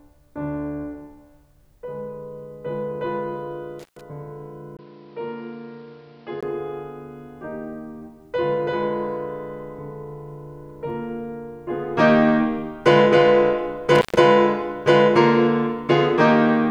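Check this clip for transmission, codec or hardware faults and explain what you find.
Two kinds of hardware fault affect this music clip. An intermittent contact appears at 3.79–4.01 s and again at 13.95–14.18 s: a loose cable or plug briefly opens, so the music drops out for about 125 ms each time, with crackle at both edges as the connection breaks and remakes.

From 4.77 to 6.43 s the input was likely switched to a poorer device. After a 20 ms gap the sound turns dull and boxy, with nothing above 5.8 kHz. The level falls by roughly 5 dB, and a new noise floor appears some 35 dB under the music.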